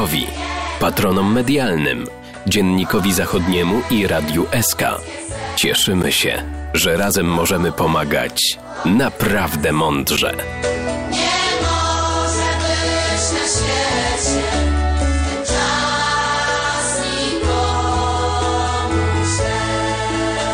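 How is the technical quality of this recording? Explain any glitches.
Two brief dropouts interrupt the recording. A block of digital silence occurs at 6.03 s and again at 10.17 s: each time, about 11 ms of output was never filled and went to zero, which fits a 512-sample buffer. The abrupt cut and return produce a tick or dip.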